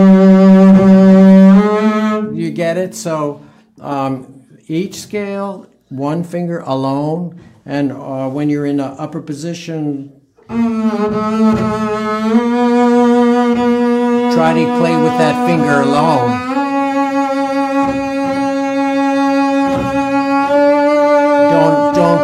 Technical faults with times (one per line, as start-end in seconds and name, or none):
0.00-1.60 hard clipping
14.38-16.18 hard clipping
21.11-22.15 hard clipping